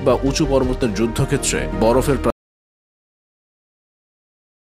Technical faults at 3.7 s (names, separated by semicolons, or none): audio dropout to silence